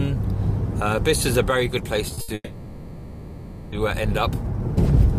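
At 2.14 s and again at 2.21 s there are two short stalls from a late packet. Each time the jitter buffer ran dry, and the receiver held the last sound for about 30 ms and then 70 ms, giving a brief smeared buzz. Nothing is lost, but the playout falls later each time.

From 2.34 to 3.74 s the call audio freezes. For about 1.38 s the final sound is drawn out as a fading buzz that drops into a short stretch of silence of about 30 ms. This is likely packets held up in transit that emptied the jitter buffer. Playback then resumes from where it stopped, adding roughly 1.4 s of delay with nothing missing.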